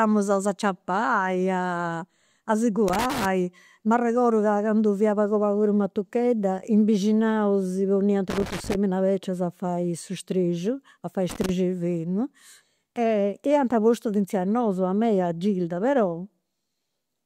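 Speech, interrupted by loose connector crackle at 2.88–3.25 s, 8.30–8.75 s and 11.30–11.49 s: irregular scratchy bursts where a worn contact intermittently breaks the signal path.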